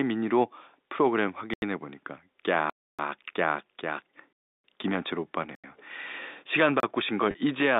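Blocks of digital silence appear at 1.54 to 1.62 s, 2.70 to 2.99 s, 4.33 to 4.64 s, 5.55 to 5.64 s and 6.80 to 6.83 s. In each, the audio drops straight to silence and returns with no fade. The two 85 ms holes match in length, which fits a 4096-sample output buffer that was not refilled in time. The longer gaps, about 290 ms and 313 ms, are clear holes in the speech, and the 29 ms one is a short pop.

Packet loss with pitch repetition follows at 7.31 to 7.34 s. Roughly 30 ms of audio, likely a single packet, went missing, and the receiver filled the gap by repeating the last pitch period while fading it down. Because the gap is so short, the repeated cycle never fades to silence. It is heard as a brief, slightly buzzy sustain before normal sound resumes. The band stays within the telephone limits of the G.711 line, about 250 Hz to 3.7 kHz.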